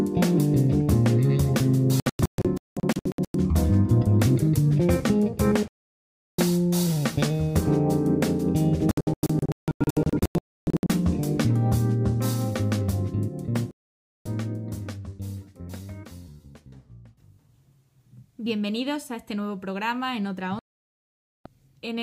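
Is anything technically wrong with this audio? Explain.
Yes. The audio repeatedly cuts to silence in a digital broadcast dropout: at 2.0 to 3.35 s (about 0.8 s lost in scattered holes, longest 0.19 s), 5.68 to 6.39 s, 8.91 to 10.9 s (about 1.28 s lost in scattered holes, longest 0.29 s), 13.71 to 14.26 s, and 20.59 to 21.46 s. The receiver muted whenever incoming frames were missing or corrupt, so whatever was broadcast during each gap is simply gone.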